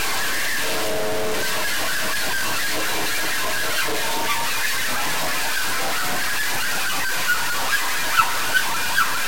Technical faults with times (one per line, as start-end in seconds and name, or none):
0.00-9.27 low bit depth without dither